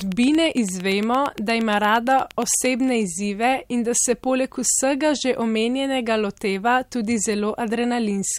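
A speech recording opens with a train of clicks: a steady ticking runs from 0.01 s to 2.66 s, about 8.7 clicks per second at even spacing, some twenty in all, each sharp pop peaking around 10 dB above the speech and stopping just before "izzive in da se". The near-identical shape and regular pace point to a repeating pulse, likely interference from nearby equipment or a faulty connection or power supply.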